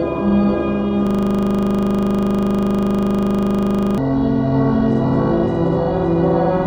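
A system hang loop affects this recording of everyday sounds: from 1.07 to 3.98 s the system froze while the hardware replayed one 40 ms buffer, producing a rapid 25 Hz stuttering buzz.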